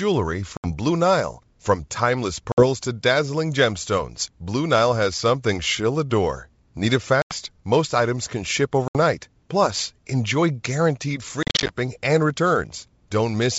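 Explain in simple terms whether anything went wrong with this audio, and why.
The speech drops out abruptly at 0.57, 2.52 (just before "to dazzling gemstones"), 7.22 and 8.88 seconds (just after "items can ship"). Each gap is silent for less than a tenth of a second, and the audio comes back slightly distorted. At 11.4 to 11.7 seconds, after "enjoy guaranteed", several short holes are scattered together. This is packet loss on an ADPCM call: chunks of the G.722 stream went missing, and the decoder briefly lost track of the sound before catching up.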